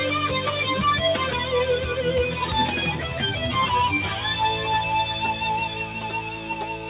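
A noise suppressor built for speech stays active on this sound from start to finish. It treats sustained tones and decaying tails as noise and pulls them down, so the level swings by around 5 dB. Onsets pass while held material sinks, giving a pumping, thinned character.

From 5.87 s to the end at 6.90 s, the suppressor cuts a sound it mistook for noise, pulling it down by up to about 5 dB. The steady and fading portion is hit hardest, so it sinks in level or its decay is cut short. The call path also limits the band to 4 kHz.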